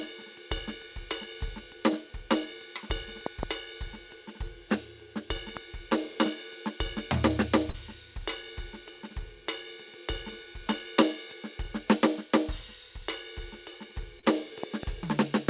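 A sudden voltage step, likely from a plug, switch, static discharge or driver glitch, entered the signal chain at 3.26 to 3.45 s, where it lands as two loud pops in quick succession. A single pop follows at 5.57 to 5.59 s, and another pair at 14.63 to 14.85 s. Each peaks some 15 dB above the music, a sharp thump sitting on top while the music carries on underneath.

At 7.70 to 7.75 s, about 40 ms of audio failed to reach the decoder in time, a short concealed packet loss. The receiver bridged roughly 34 ms of it by extending the preceding sound before blending back, so the music briefly smears and wobbles. The same happens at 14.19 to 14.25 s, with about 31 ms filled, all within the G.711 call band that stops at 4 kHz.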